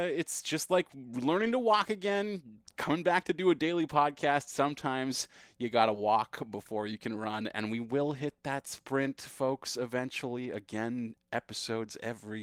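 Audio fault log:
1.41–1.51 s, lost packet rebuilt from error correction: between "it's just like" and "to walk" there is no gap. About 60 ms, consistent with three packets, plays from low-bitrate backup copies, so it sounds rougher and noisier. On a spectrogram the harmonics blur into a smeared, grainier patch, with no silent dropout in the waveform.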